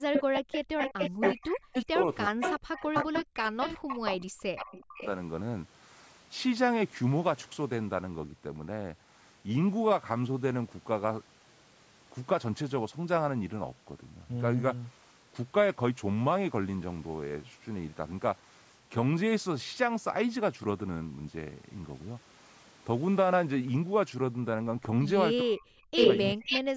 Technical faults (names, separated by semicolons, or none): speech suppressed in double talk; echo leak; background gated by the echo canceller